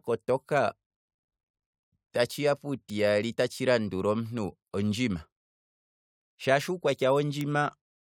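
At 2.90 s a bit error spike cuts through the speech as one sharp tick. A single sample had one bit flipped, so its value jumped by a power of two and came straight back. The click is broadband and unrelated to the voice. The same tick recurs at 7.41 s.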